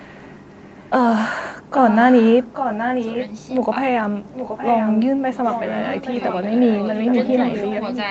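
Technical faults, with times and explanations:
0.42–0.91 s, 1.63–3.46 s, 4.31–5.03 s and 5.49 s to the end: echo leak. A delayed copy of the speech trails it by 823 ms each time. In the first stretch it's faint, way down under the talker. From 1.63 s it gets strong, close to the speech level, and the last two stretches sit a little lower but stay clearly audible. The fixed lag points to a far end on loudspeaker whose echo canceller likely let its mic pickup slip back into the call.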